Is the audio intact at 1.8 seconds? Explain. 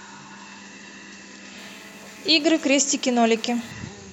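No. At 1.8 seconds a hard, raspy buzz sits under the speech, pitched at about 217 Hz and thick with harmonics, roughly 26 dB below the speech level and holding steady from 1.58 to 3.72 s. This is GSM phone buzz: a nearby 2G handset on a call transmits in bursts 217 times a second, and the audio circuitry rectifies those radio pulses into an audible tone that has nothing to do with the speech.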